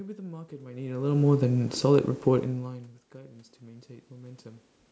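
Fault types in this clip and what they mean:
Automatic gain rising: the gain control, sensing a quiet input, slowly raised its gain by about 6 dB from 3.12 to 4.53 s, swelling speech and background together.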